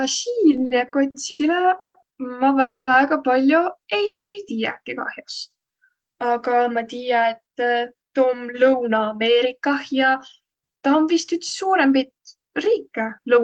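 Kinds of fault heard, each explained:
Repeated stalls (stutter): between 0.51 and 1.41 s the jitter buffer ran dry seven times, filling brief gaps up to 90 ms, choppier than one long freeze.
Call audio freeze: single longer halts, likely from packets held up in transit, fading mostly to silence for up to 0.23 s, then resuming just before "tiiäki kah'os".
Jitter buffer slow-down: after "tiiäki kah'os", repeated pitch periods stretch the sound to 86% speed at unchanged pitch, a drawn-out drag rather than outright stops.
Jitter buffer speed-up: from 7.6 s to the end, trimmed pitch periods push the speech to 107% speed at the same pitch, losing about 0.4 s and sounding hurried.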